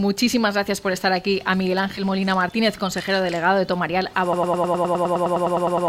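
At 1.97 to 2.01 s, compressed frames were skipped: a couple of frames, consistent with 20 ms frame length, were missing or rejected by the decoder, so about 40 ms of audio never plays. The sound jumps forward.

From 4.33 s to the end, a broken-record loop takes over, likely because the player or stream stalled and kept resending its last buffered fragment. A 0.10 s piece repeats back to back about 15 times, producing a rapid stutter while the intended audio is lost.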